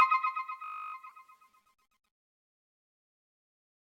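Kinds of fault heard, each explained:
System hang loop: a steady 50 Hz buzz from 0.64 to 0.94 s, as a 20 ms slice repeats 15 times while the stalled system keeps replaying its buffer.
Corrupt frame decoded: a brief chirpy burst around 1.06 to 1.12 s, where damaged compressed frames were decoded anyway, spraying energy into wrong frequencies.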